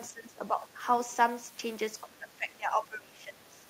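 An echo canceller likely failed to separate the near talker from loudspeaker echo and turned both down, giving speech suppressed in double talk. From 0.09 to 0.8 s the speech dips by roughly 15 dB, and from 2.04 to 3.65 s by around 20 dB, thinning and breaking up.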